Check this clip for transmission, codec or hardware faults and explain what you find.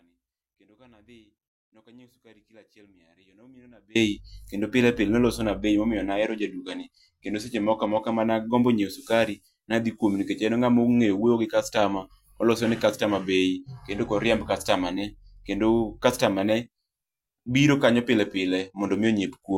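Two kinds of fault are present: a dropout at the very start and two episodes of reduced Bluetooth codec quality.

From the start to 3.95 s, already under way when the clip opens, the speech is missing and only a faint trace of sound remains, far below normal level, roughly 30 dB down. Full speech returns abruptly with "kendo pile pile nolosona". This is an audio dropout to a faint residue. The likely cause is that the wanted signal was lost while the path after the break stayed live, letting through only a weak leak.

From 6.23 to 8.24 s, between "pile nolosona bei momio" and "nagombo nyieo sukari nadhi", and again from 18.59 s after "biro kanyo pile" to the end, the treble dulls and a gritty, grainy noise rises around the speech. This is a Bluetooth SBC bit pool drop. The sound fits the bit pool falling from 28 to 13, roughly 102 kbps. With so few bits, the upper sub-bands get little or nothing and the remaining bands are coarsely quantised.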